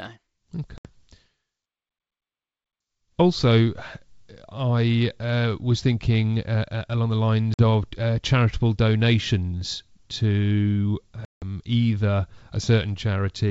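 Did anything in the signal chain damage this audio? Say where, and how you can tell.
Yes, in the network stage: packet loss on an ADPCM call, heard over the G.722 wideband link at 64 kbit/s. Silent holes fall at 0.78–0.87 s, at 7.54–7.62 s between "uh uh along the" and "of uh charitable donations", and at 11.25–11.43 s after "uh charitable donations to". They cut roughly 70, 50 and 170 ms of audio, which fits runs of about 10 ms packets. A waveform shows abrupt flat gaps, and a spectrogram shows blank full-band columns with hard edges. When the audio resumes, the receiver's adaptive predictor and step size no longer match the sender's, so it returns slightly distorted before settling.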